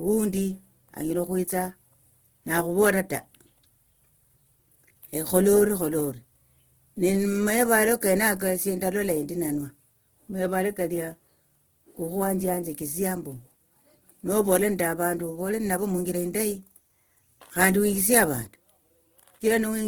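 Opus compression throughout: the speech sounds plainly rough and grainy, likely because the music-mode encoder, at a rate fitting about 16 kbps, fills bands with noise.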